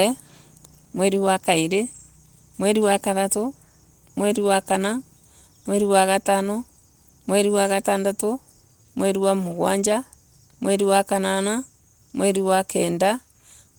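No technical faults are audible.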